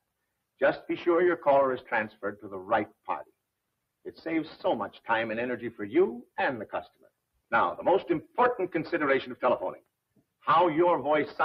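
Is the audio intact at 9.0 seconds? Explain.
Yes, the audio is intact at 9.0 seconds, with no fault heard at that moment.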